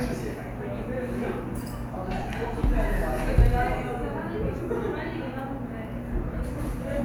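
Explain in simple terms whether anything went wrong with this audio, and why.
Three very brief rough, hissy blips interrupt the sound, at about 2.23 s, 4.10 s and 6.32 s. Each lasts only about 10 ms, which points to a single lost frame each time. These are lost LE Audio frames: pieces of the Bluetooth LE Audio stream never arrived, so the LC3 decoder filled each gap by reusing the last frame's tonal content with scrambled phase, turning clean sound into a tiny noisy smear.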